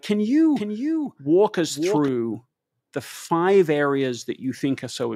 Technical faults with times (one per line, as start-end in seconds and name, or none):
0.56-2.08 doubled audio track